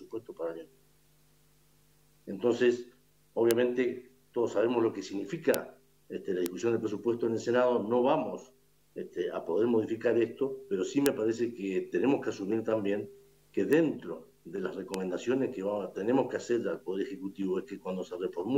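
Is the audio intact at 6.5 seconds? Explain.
No, not quite. At 6.46 s there's a bit error spike: a single sample where one bit got flipped, most likely in memory or on a digital link, so its value jumps by a power of two and snaps straight back. It peaks at about -8 dBFS, and because it's just one sample wide it comes out as a lone sharp tick, broadband and completely unrelated to the sound around it.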